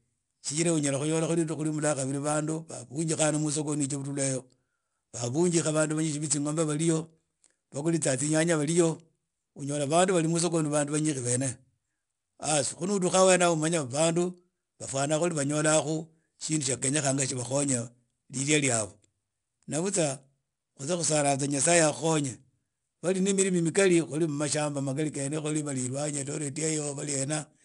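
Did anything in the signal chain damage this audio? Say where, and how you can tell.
Yes. 4-bit ADPCM compression at the codec stage runs throughout the speech: a gritty hiss rides every loud syllable and sharp attacks distort where the step size lags. Nothing sounds above 10.6 kHz, which fits a low sample rate near 22 kHz.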